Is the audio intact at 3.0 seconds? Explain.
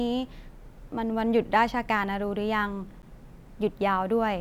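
No. At 3.02 s there is a block of digital silence about 10.7 ms long, which fits a 512-sample buffer replaced by zeros. The hard cut in and out gives a tick. On the waveform it appears as a flat gap, and on the spectrogram as a thin blank column with broadband streaks at both edges.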